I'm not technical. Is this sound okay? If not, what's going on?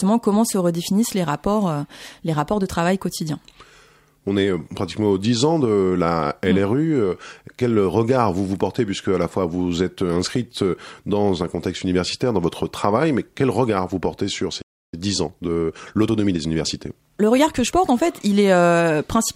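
No. At 14.61 s, right after "regard vous portez sur", the speech cuts out completely for about 0.31 s and then picks up again at 14.94 s. This is a playback stall. The player stopped producing sound for that moment, most likely because it ran short of incoming audio data or was briefly held up by something else on the device. When it recovered, it continued from the point where it had paused.

From 14.94 s to 17.94 s the speech runs about 1.1 times faster than normal, though the pitch stays the same. This is time-compressed catch-up. Having fallen behind during the pause, the player makes up the lost time by removing many tiny slices of audio and blending the edges together. The effect is speech that sounds slightly rushed until normal speed returns just before 18 s.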